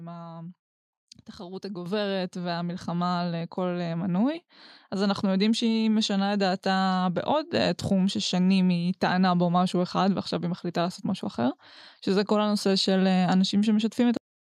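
A microphone volume step-up hits at 1.86 s: the call software judged the input too quiet and raised the device gain by about 7 dB at once, so speech and background jump louder together. A cut-off end follows at 14.17 s, where the final buffers never reached output, and the speech stops mid-sound, dropping straight into digital silence with no natural decay.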